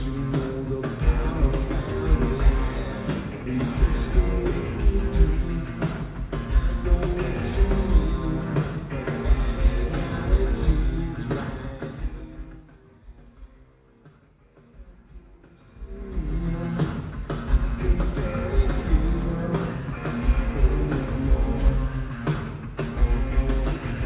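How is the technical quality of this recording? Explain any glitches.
There is one clear glitch, a burst of zipper noise during a level change, heard over a band-limited call-quality sound with nothing above 4 kHz, which fits a G.711 mu-law path at 64 kbps.

From 15.6 to 16.48 s, zipper noise accompanies a level change of roughly 25 dB. The gain moves in 1 dB jumps, around 30 per second, with no smoothing between them. Each jump puts a small discontinuity into the waveform and produces a tiny click. At that rate the clicks merge into a fast ticking, zipping texture riding on the sound until the level change completes.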